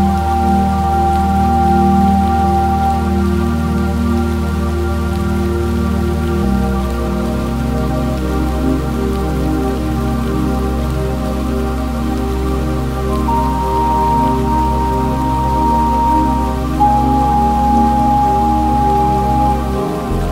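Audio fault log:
No faults can be heard anywhere in this clip. There is nothing to log.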